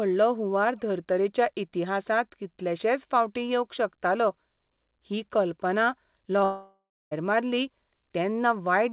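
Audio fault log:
6.44–7.13 s: long network dropout, just after "ही कल्पना". The sound breaks off and its last moment is stretched into a fading buzz, leaving about 0.29 s of near-silence before the audio resumes, most likely because packets stopped arriving, with roughly 0.68 s of the speech lost.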